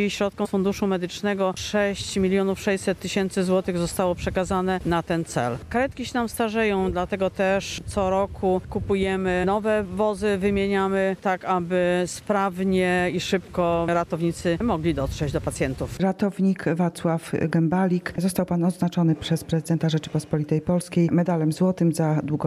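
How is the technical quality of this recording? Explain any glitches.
The recording has two brief glitches, both damaged data in a compressed stream, at 0.44 to 0.47 s and at 9.43 s. Corrupted bytes make the decoder misread those frames and lose sync until it finds the next valid frame header, leaving a short glitch each time.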